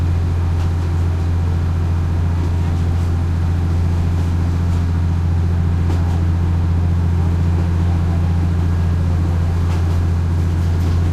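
No technical faults are audible.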